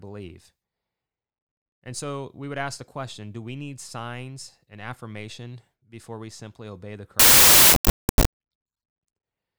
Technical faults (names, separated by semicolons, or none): samples built from the wrong bytes